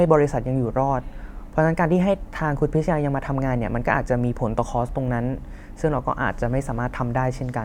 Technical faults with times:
none

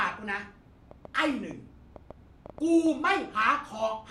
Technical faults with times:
0.91-2.87 train of clicks

